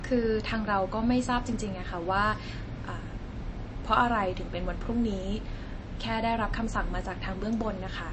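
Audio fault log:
Throughout: MP3 compression, plainly audible. Nothing remains above 8.3 kHz. Weak frequency lines drop in and out, so speech sounds watery, likely from a starved bitrate near 32 kbps.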